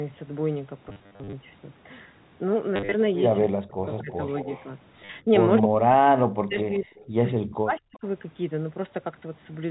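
From 0.89 to 1.33 s the audio breaks into a stuttering buzz: packet loss with the last packet repeated. About 270 ms went missing across that stretch, in runs up to 50 ms. Each gap is filled by replaying the previous chunk, and the repeat rate points to 10 ms packets, giving a 100 Hz buzz. Unlike plain dropouts, the sound keeps going but turns robotic. Shorter bursts follow at 2.76 to 2.94 s and 5.05 to 5.09 s.

At 3.41 to 3.47 s a delayed copy of the sound appears 218 ms behind the original, about 10 dB down. It returns from 3.85 to 4.65 s at about 20 dB down, at 5.6 to 5.68 s, and weakly from 6.74 to 7.04 s. This is an echo leak, the likely result of a loudspeaker-side echo canceller letting some of the return path through. The fixed 218 ms lag is what separates it from room reverberation, which would blur the sound rather than repeat it.

Between 3.48 and 4.46 s the main talker dips sharply, at worst by about 40 dB. 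The same thing happens briefly at 5.25 to 5.31 s, then from 5.62 to 6.86 s and from 7.37 to 8.05 s. This is speech suppressed in double talk, likely an echo canceller clamping down while both sides speak. It differs from packet loss because the sound goes quiet rather than buzzing.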